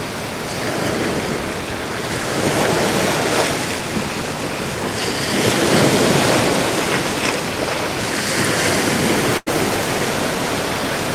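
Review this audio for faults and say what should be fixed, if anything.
Burst of packet loss, 9.37 to 9.48 s: consecutive packets were lost or arrived too late, so the receiver held and faded the last sound for 90 ms, then resumed with 100 ms skipped. Forward error correction and a deeper jitter buffer on the network path would prevent this.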